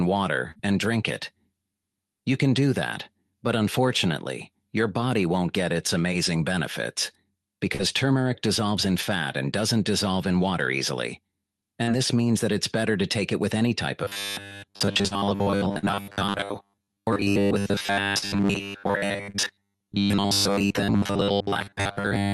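Short concealed packet loss shows up first at 0.51 s, then at 7.75 and 11.83 s. Each time about 40 ms never arrived, and the decoder papered over it by extending what came before, so you get a quick smear or wobble.

From 14.04 s to the end, there's robotic sound from repeated short buffers. A rigid, metallic 100 Hz buzz sits over the sound, most likely because audio kept arriving late and the last 10 ms was looped for most of that stretch while real material was skipped.

Inside that robotic stretch, four more short concealed losses land at 15.07, 15.79, 18.18 and 19.30 s. Each is another roughly 40 ms gap filled in, adding small smears on top of the buzz, with the high end topping out around 12 kHz throughout.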